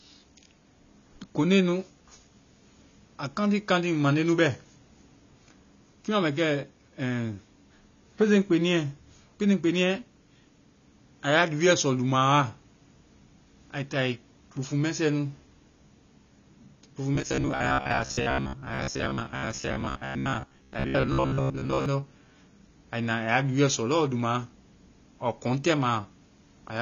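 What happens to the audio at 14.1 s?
At 14.1 s the speech has the same damage heard through the whole clip. The top of the spectrum is cut off, so it is dull and muffled. Sibilants smear into a warbling fizz. The likely cause is AAC compression at a low bitrate, near 24 kbps, which discards high bands.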